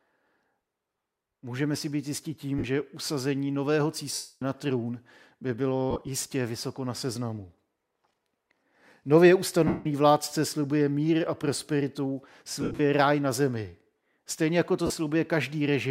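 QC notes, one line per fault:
2.58 s, 4.14 s, 5.91 s, 9.67 s, 12.61 s, 14.86 s, lost LE Audio frames: gaps of 52.5, 270, 105, 180, 150 and 37.5 ms (the 5.91 s and 12.61 s losses scattered). The LC3 decoder repeats the last spectrum with randomised signs, so the speech smears into noise rather than falling silent, and the 270 ms gap fades out.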